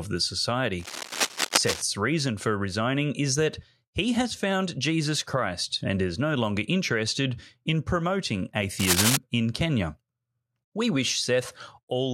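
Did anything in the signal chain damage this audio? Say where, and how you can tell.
Yes, cable scratch noise points to the analogue wiring. From 0.80 to 1.82 s, just before "reason for resigning is", rough scratching sits about 5 dB under the speech. From 8.79 to 9.17 s, right after "longer interested in promoting", a shorter burst arrives at roughly speech level. The likely cause is a worn cable or connector being moved, its contact resistance jumping rapidly. A spectrogram shows ragged broadband smears, and the waveform shows dense, irregular spikes.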